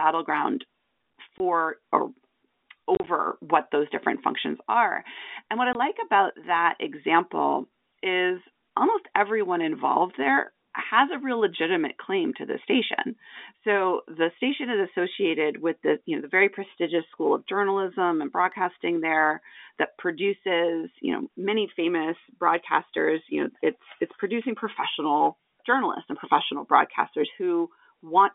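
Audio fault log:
1.38–1.40 s, 2.95–3.07 s, 5.73–5.75 s: packet loss filled with silence. The receiver replaced missing audio with dead silence, so the sound cuts out with hard edges. The gaps are 20 ms each, and there is a scattered 60 ms across 120 ms (longest 30 ms) just before "what those different functions". A 20 ms gap also falls between "what I" and "about that example is". These sizes fit 10 ms packets. On a waveform the gaps show as flat near-silent stretches with abrupt walls. On a spectrogram they are blank vertical strips with abrupt edges, set within the telephone band of roughly 250 Hz to 3.6 kHz.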